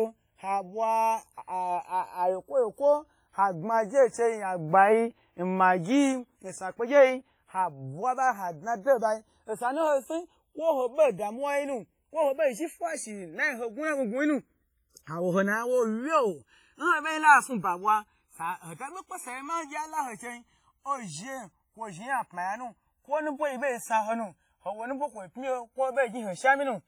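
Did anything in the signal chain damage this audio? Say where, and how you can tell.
Yes. Channels drifting apart, from converters on separate clocks: the delay slides to about 1.5 ms, giving slow flanging throughout, unlike the static comb of a fixed offset.

Heavy ringing, washy smear and hiss that breathes with the speech throughout, unlike steady noise, mark the codec stage. The likely cause is WMA compression at around 24 kbps.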